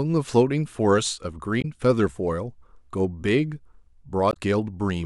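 At 1.58 to 1.65 s and again at 4.30 to 4.36 s, the speech is interrupted by damaged data in a compressed stream: corrupted bytes make the decoder misread frames and lose sync until it finds a valid header. Each event is a brief chirp or squawk about 60 to 70 ms long. On a spectrogram it shows as a short block of smeared, broadband or oddly banded energy breaking the speech harmonics, and the waveform shows an abrupt discontinuity.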